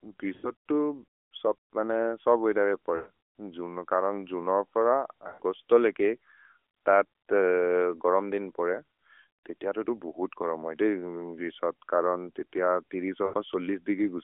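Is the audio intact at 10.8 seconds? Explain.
Yes, the audio is intact at 10.8 seconds, with the speech passing through the AMR narrowband mobile codec as it does across the clip and no fault at that moment.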